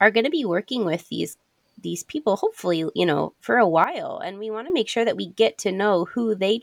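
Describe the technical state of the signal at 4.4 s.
At 4.4 s the signal is inside a sudden gain jump running from 3.84 to 4.7 s, where the level sits about 12 dB below the surrounding speech. The drop arrives in a single step rather than a fade, most likely from a digital gain setting being applied without a ramp, so the speech and the background noise fall together at 3.84 s and return together at 4.7 s.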